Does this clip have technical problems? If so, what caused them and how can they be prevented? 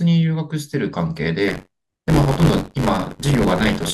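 Yes. Buffer tearing runs from 1.47 s to the end, a rattling buzz near 94 Hz. Writer and reader cross mid-buffer, splicing in roughly a fifth of older audio, which fits a 512-sample buffer. Keep the write pointer safely ahead with adequate latency margin.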